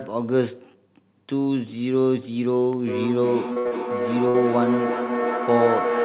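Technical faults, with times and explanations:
2.87 s to the end: feedback howl. A microphone-to-loudspeaker loop gains level on each pass, so the repeats grow and narrow to a tone near 500 Hz, peaking about 2 dB below the speech. The loop pulses roughly every 0.4 s. On a spectrogram it is a bright horizontal band, and the waveform envelope swells rhythmically.
3.53 to 3.59 s and 3.68 to 3.74 s: short concealed packet loss. Each time about 30 ms of audio failed to arrive, and the decoder extended the preceding sound to cover it before blending back, which gives a brief smear or wobble. A spectrogram shows a short smoothed or repeated patch.
3.59 to 3.68 s and 4.28 to 4.37 s: burst of packet loss. About 60 ms went missing each time. The receiver held the last sound as a decaying buzz or hiss, then resumed further on with that span gone. On a spectrogram this appears as a smeared, fading stretch that ends in an abrupt change. 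The waveform shows a dwindling envelope and a jump where playback resumes.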